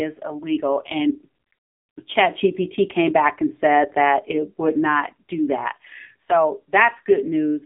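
From start to end, the speech carries AMR narrowband mobile codec damage. It sits in a phone band of 150 Hz to 3.7 kHz. Nothing passes above 3.8 kHz. A sparse vocal-tract model sounds plainly buzzy and synthetic, which fits a low rate near 7.4 kbps.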